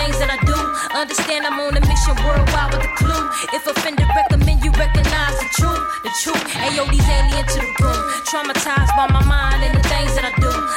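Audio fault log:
7.32 s, damaged data in a compressed stream: a brief glitch breaks into the sound at this instant. Part of the encoded data here is corrupt, so the decoder cannot read those frames properly, briefly outputs garbage or drops them, loses its place, and scans ahead for the next valid frame header. The garbled burst produces the blip.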